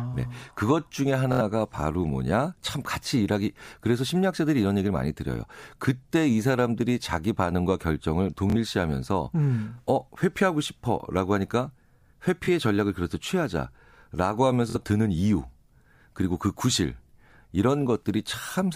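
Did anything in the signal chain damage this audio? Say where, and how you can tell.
Yes. Four short stutters, at 1.33–1.41, 8.50–8.56, 12.45–12.48 and 14.70–14.76 s, are Bluetooth stutter on the wireless link. Packets went missing, so the receiver looped its last short slice and then jumped ahead, losing 23 to 70 ms each time.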